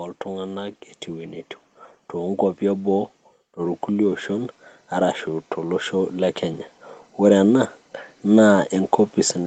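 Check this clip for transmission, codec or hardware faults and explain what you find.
One fault appears twice: automatic gain rising. From 2.13 to 6.21 s, the speech and the background behind it swell together by about 6 dB. From 7.18 s to 9.46 s, they swell again by about 3 dB. The gain control judged the input too quiet and turned itself up gradually, lifting everything at once. The high end stops near 8 kHz, as set by the call path's Opus coding.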